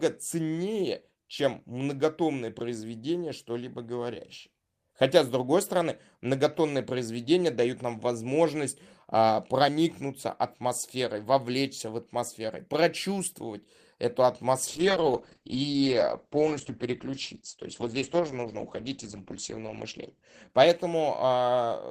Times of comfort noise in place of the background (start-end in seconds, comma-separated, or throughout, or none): none